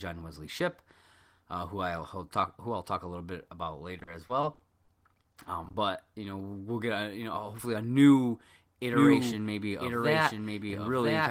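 Repeated packet loss (robotic sound) runs from 3.99 to 5.75 s: fourteen short gaps, none longer than 40 ms, each patched by stretching the preceding sound. About 280 ms is filled this way and 200 ms simply drops out, so the speech turns choppy with pieces missing.

A doubled audio track enters abruptly at 8.94 s and lasts to the end: a full-band copy of the speech, a few decibels quieter, trails about a second behind with no reverberant tail. The likely cause is a second, slower capture path or an out-of-step edit.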